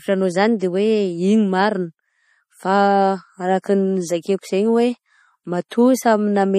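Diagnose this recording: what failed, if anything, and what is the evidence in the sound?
The whole clip has plainly audible codec damage, most likely from MP3 compression at a low bitrate, around 40 kbps judging by the sound. Nothing is left above 15.2 kHz because the encoder cut the treble at a fixed point. Weaker frequency components flicker in and out from frame to frame, which gives the speech that watery, swirly texture and roughens the sibilants.

Pre-echo appears twice, from 3.62 to 3.64 s and from 5.69 to 5.71 s, as brief hiss smeared ahead of sharp attacks, about 20 ms and 26 ms long. This is also a codec-stage fault. The encoder spreads quantisation noise across a whole transform block, so noise sized for the loud onset also fills the quiet moment just before it. That softens those attacks.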